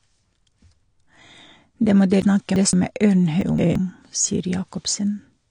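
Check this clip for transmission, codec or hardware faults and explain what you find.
Two kinds of fault are present.

The speech has likely been encoded with AAC compression at a low bitrate, around 32 kbps. The encoder drops everything above 9.8 kHz and quantises the remaining bands coarsely, so the sound is dull and smeared, with a plainly audible warbling, fizzy texture on sibilants.

Chunks out of order occur twice, at 2.22 to 2.73 s and at 3.41 to 3.76 s. A block of roughly 171 ms was delivered late and played after the audio that should have followed it. The first displacement fits a lag of two chunks and the second a lag of one. Nothing is missing, but each passage sounds jumbled.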